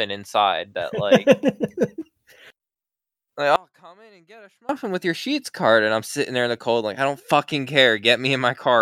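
From 3.56 to 4.69 s the speech drops out to a faint residue, about 30 dB down, before "with your sheets card". A break in the signal path is the likely cause.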